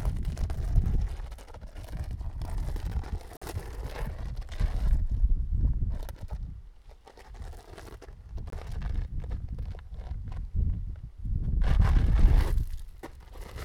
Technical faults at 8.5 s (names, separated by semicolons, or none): Bluetooth dropout